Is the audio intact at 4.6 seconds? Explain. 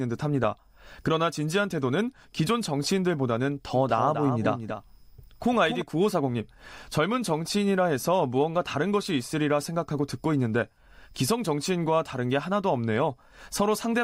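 No. From 3.74 to 5.82 s a doubled audio track plays: a second full-band copy of the speech trails by roughly a fifth of a second, about 10 dB quieter, likely from a slower capture path. The spectrogram shows every pattern repeated faintly, abruptly beginning and ending.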